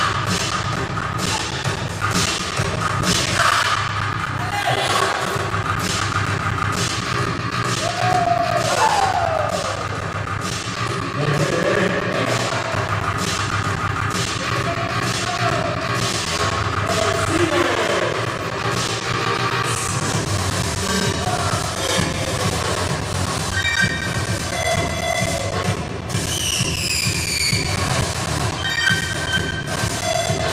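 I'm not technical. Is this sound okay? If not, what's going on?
No. From 0.13 s to 30.39 s there are periodic USB or driver dropouts: every 0.125 s, around 200 times, about 10 ms of sound drops to silence, giving steady ticks. Unlike random crackle, they're perfectly evenly spaced and sound only while audio plays.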